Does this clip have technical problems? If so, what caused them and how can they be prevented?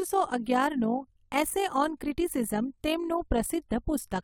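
Yes. Overlap-add ripple runs through the whole speech clip. The level pulses by about 6 dB around 50 times a second, giving a robotic flutter. The overlapping frame windows did not sum to a constant gain. Prevent it by using a window and hop size that overlap-add to constant gain.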